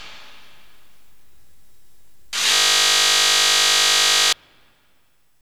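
At 2.54 s the audio locks into a system hang loop and stays stuck until 4.33 s. What's going on is that the machine or its driver froze while the sound hardware kept replaying the same 20 ms chunk of its ring buffer, nearly ninety times in a row. With a slice that short, you hear a flat, steady buzz at 50 Hz where the sound should continue.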